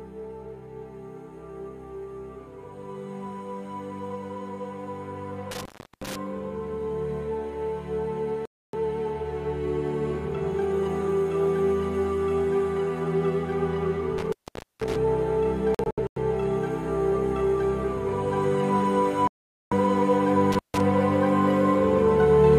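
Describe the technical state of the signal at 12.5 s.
At 12.5 s the signal is intact, with no audible dropout, clipping, glitch or other technical fault at that point.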